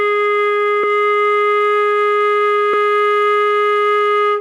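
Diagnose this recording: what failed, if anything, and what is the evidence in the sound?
The music skips forward at 0.83 s and 2.73 s, losing about a tenth of a second each time with no silent gap. That regular spacing fits two-second chunks, so this is audio missing between chunks, likely at the buffer stage. A network dropout would leave silence instead.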